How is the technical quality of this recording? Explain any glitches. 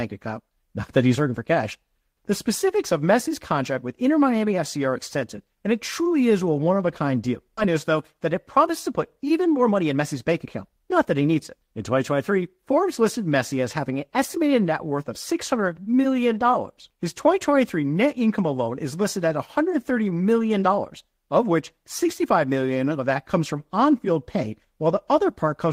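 There are three noticeable glitches, all in the first half: a level jump near the start, then a jump forward in the audio followed by a stretch that runs fast.

At 0.83 s there's a sudden gain jump. The speech and the background noise both get louder by about 4 dB at once, just before "earning for cash", and stay raised until about 1.16 s. The step happens between one sample and the next, with no fade. That most likely comes from a gain setting being applied without a ramp, so the whole signal shifts level together instead of easing into it.

At 7.57 s, right after "of a kind deal", there's a skip ahead. Roughly a second of audio is simply gone, and nothing fills the gap, so the sound on either side is butted together almost seamlessly. This is what you get when a chunk is dropped in transit or thrown away by an overfull jitter buffer while later audio is already queued up.

From 7.67 s to 12.79 s a jitter buffer speed-up kicks in. 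The speech plays at about 111% speed but keeps its normal pitch, so it sounds a bit rushed. The receiver was holding more audio than it wanted and trimmed it back by repeatedly cutting out tiny pitch-period-sized slices. Across that stretch the cuts add up to about half a second.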